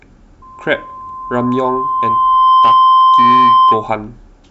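From 0.42 s to 3.95 s a loudspeaker feedback squeal runs under the speech: a steady 1 kHz tone that swells over roughly two seconds to sit about 10 dB above it, because the microphone is re-amplifying its own loudspeaker with loop gain above one at that frequency.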